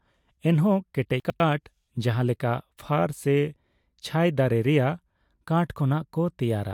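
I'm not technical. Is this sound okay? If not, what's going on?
No. From 1.2 to 1.4 s the speech briefly sounds jumbled. This is chunks out of order: two tenth-of-a-second pieces of audio swapped places, so one plays a moment late. Nothing is missing, but the joins between the pieces are abrupt.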